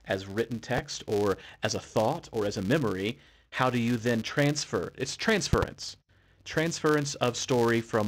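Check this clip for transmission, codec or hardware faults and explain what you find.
Two faults are present: a steady block-rate buzz through the whole speech clip, and loud pops at two moments.

Filter restarted on every block: throughout, a filter starts each block from silence, leaving a small transient at every boundary. The resulting 172 Hz buzz fits a 256-sample block and rises and falls with the speech level. A spectrogram shows harmonic lines at multiples of 172 Hz, and the waveform shows tiny regular ticks.

Loud pop: a single sharp pop at 0.78 to 0.81 s, peaking about 15 dB above the speech, then a double pop from 5.53 to 5.65 s at about 20 dB. The likely cause is a sudden voltage step from a switch, plug or static discharge. The speech continues underneath. Each pop appears as a vertical broadband stripe on a spectrogram and as a tall spike in the waveform.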